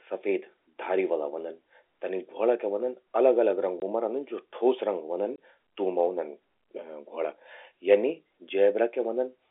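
At 3.8 s the speech drops into a short, hard-edged gap, and again at 5.36 s. Each hole lasts about 20 ms, which fits one lost packet. This is packet loss filled with silence. Both gaps cut through the telephone-band sound.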